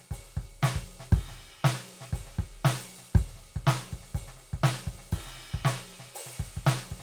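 Nothing stood out as a technical fault anywhere in this music on listening.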